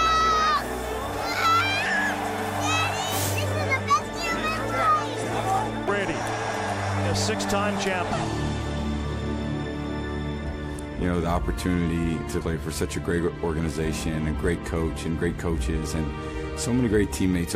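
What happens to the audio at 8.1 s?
At 8.11 s there is a brief burst of damaged data in a compressed stream. It lasts under 20 ms. Part of the encoded data at that point is wrong. The bytes may have been lost, zeroed or overwritten. The decoder cannot read those frames properly. It loses its place and hunts for the next valid frame header. What reaches the ear is a short, sharp chirp or blip cutting into the sound.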